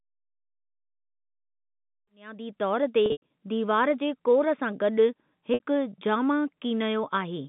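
A held, buzzy tone fades into brief silence at 3.06 to 3.30 s, after "कीनयो बुनियादी तौर ते", before the sound resumes with "दीवार जे कोर सां". This is packet loss with pitch repetition: about 160 ms went missing across 240 ms, the longest gap being 100 ms. The receiver looped the last pitch period, then faded it out. A shorter 60 ms buzzy hold follows at 5.54 to 5.60 s, after "जे कोर सां गॾु". Both losses fit 20 ms packets.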